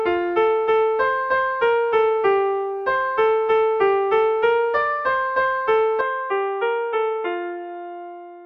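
Input switched to a poorer device at 6.01 s, running to the end: the recording most likely jumps to a lower-grade microphone path, so nothing above 3.8 kHz survives, the sound turns dull and boxy, drops roughly 5 dB, and gains faint new background noise, with no gap at the change.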